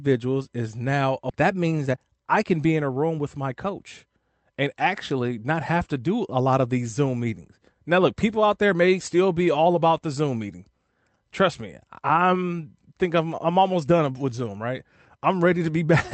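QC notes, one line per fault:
1.3 s, skip ahead: Right after "is now", roughly a second of speech is missing. Playback jumps forward with no gap, so the two sides join almost directly.
1.49–3.34 s, jitter buffer speed-up: The jitter buffer held more audio than its target. It trimmed short pitch-period pieces, about 0.3 s total. Speech runs 116% fast at unchanged pitch before "my coach and actually".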